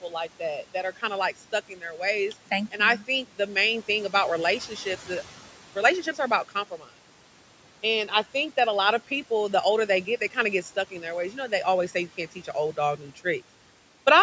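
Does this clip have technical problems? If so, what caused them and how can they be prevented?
Yes. Noise suppressor artifacts run throughout: the steady room noise, sitting about 19 dB below the speech, is pulled down by about 12 dB between phrases and returns underneath them. This can be prevented by lowering the suppression strength or reducing the room noise at the source so that less suppression is needed.

Speech cut by the noise suppressor occurs at 1.69 to 1.99 s, 6.71 to 6.90 s and 12.97 to 13.25 s. Each time, soft speech was mistaken for noise and dropped by about 9 to 10 dB for roughly 100 to 150 ms, making those sounds faint. This can be prevented by using a less aggressive suppressor setting or bringing the microphone closer so that quiet speech stands clearly above the noise.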